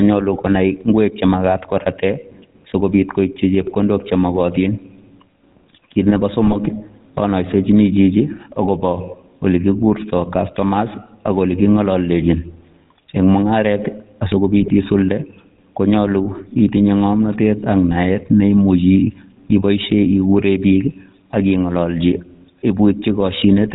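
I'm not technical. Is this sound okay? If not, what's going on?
No. The whole recording has passed through the GSM full-rate codec, the speech compression used by early mobile phones. It rebuilds the voice from a simplified model driven by a regular train of pulses, which gives the speech a plainly audible buzzy, gravelly roughness throughout. It also discards everything above 4 kHz, so the voice sounds narrow and muffled, lacking the crisp detail of s and t sounds.

There are also three short bursts of GSM bit errors, at 3.62 to 3.71 s, 6.44 to 6.57 s and 14.60 to 14.69 s. At these moments corrupted data reached the decoder, so for a fraction of a second it rebuilt the voice from wrong settings. The speech briefly breaks up into squawks, pops or a gargling sound before returning to the steady buzzy quality. The longest of these is the one at about 6.5 s.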